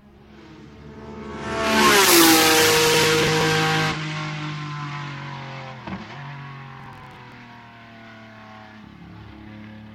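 Processor overload crackle at 2.87–3.41 s and 6.80–7.32 s: missed deadlines on buffers of around 10 ms leave hard-edged gaps, heard as gritty tearing.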